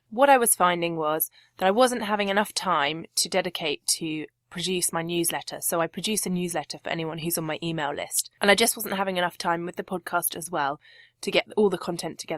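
Nothing technical goes wrong anywhere in this stretch of speech, so there's no fault to point to at any moment.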